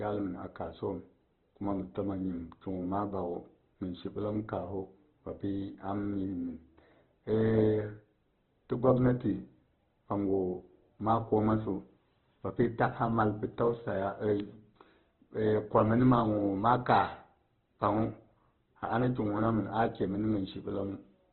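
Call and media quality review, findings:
Speech grainy and rough throughout, nothing above 4.1 kHz, so dull narrowband sound. Likely Opus compression at a very low bitrate, which fits around 12 kbps: starved bands get noise-filled, top end dropped to save bits.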